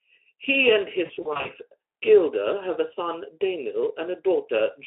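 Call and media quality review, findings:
VoIP packet loss concealed by the speech codec, 1.05–1.51 s: scattered buzzy, smeared bursts fading in level, longest 40 ms, 180 ms lost over 400 ms. Speex decoder extrapolating last pitch and filter; no silent gaps, unlike hard dropouts.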